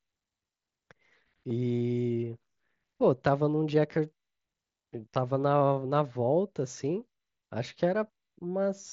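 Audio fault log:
1.49 s and 5.14 s, concealed Bluetooth headset packet loss: each is a short patched gap of about 15 ms in the speech. The receiver patched each gap by repeating the best-matching recent stretch of waveform, which fits a couple of lost headset packets within the wideband mSBC stream.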